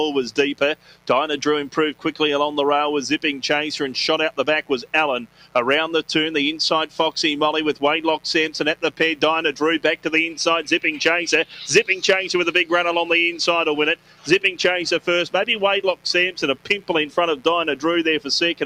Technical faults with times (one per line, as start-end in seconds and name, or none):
0.00-18.66 mains buzz
0.00-18.66 noise suppressor applied to music or sounds
0.75-1.09 sound cut by the noise suppressor
5.27-5.55 sound cut by the noise suppressor
13.96-14.27 sound cut by the noise suppressor
16.57-16.89 sound cut by the noise suppressor